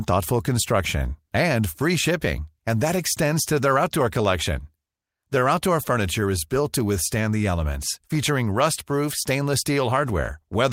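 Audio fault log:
throughout, clock drift between sender and receiver: the sender's clock runs roughly one and a half percent slow, so the receiver's buffer keeps draining; this brings uneven hiccups rather than a steady pitch shift.
0.98–10.69 s, repeated timing corrections: the receiver repeats short pieces to fill the shortfall, so the sound plays at 98% speed and gains roughly 150 ms. The edits are unevenly spaced.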